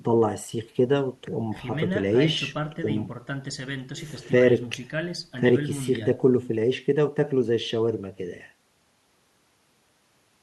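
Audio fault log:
No technical faults can be heard anywhere in the speech: the signal stays continuous and steady in level, with no interruptions, distortion or added noise.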